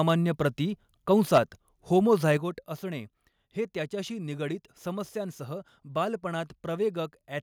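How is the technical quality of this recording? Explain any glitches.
The recording has two related technical problems early in the speech: the microphone clips on loud peaks, and the level then drops abruptly in steps.

Microphone overload occurs at 0.09 to 0.11 s, 1.11 to 1.38 s and 1.98 to 2.32 s. The likely cause is an input gain set too high, so peaks exceed the converter's ceiling by about 1, 5 and 1 dB and have their tops sheared off. This adds a harsh, crackly edge, worst in the middle burst.

Microphone volume stepped down occurs at 1.38 s and 2.37 s, the second just before "असणे हे त्याच्याशी निगडीत". Each comes right after a clipped stretch. The likely cause is the call software reacting to overload by lowering the input volume. Voice and background fall suddenly, by about 3 dB and then about 7 dB.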